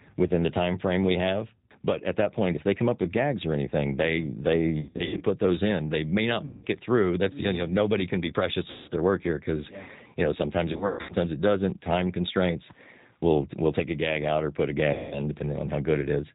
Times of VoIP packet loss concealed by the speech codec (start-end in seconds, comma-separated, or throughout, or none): 4.81-5.24, 6.45-6.65, 8.70-8.91, 10.73-11.13, 14.93-15.22